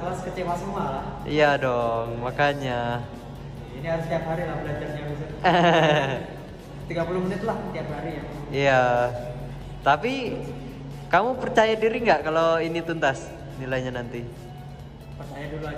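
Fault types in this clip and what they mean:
No technical faults can be heard anywhere in the signal.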